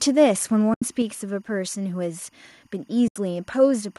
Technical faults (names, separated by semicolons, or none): timecode bleed; AAC frame loss with muting; microphone volume stepped down